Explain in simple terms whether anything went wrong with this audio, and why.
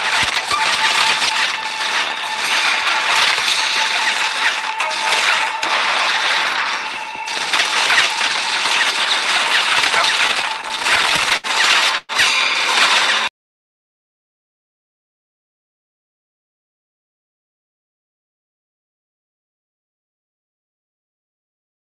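Between 10.27 and 11.47 s the audio has repeated stalls (stutter): 14 brief hitches, the longest about 70 ms. Packets kept arriving late, so the receiver repeatedly stretched the last sound to fill the wait. That added about 200 ms in total without losing anything, so the sound drags and stumbles.

From 11.98 to 12.12 s there is a call audio freeze. The last sound is held and fades, with a very short silence, for about 110 ms before the audio resumes where it left off. The likely cause is packets held up in transit, which emptied the jitter buffer and inserted a gap.

From 13.30 to 14.91 s a jitter buffer slow-down plays the audio at 96% speed with the pitch unchanged. The receiver was rebuilding its reserve of packets, so it repeated tiny slices of sound, adding 70 ms. Sounds there come out slightly drawn out.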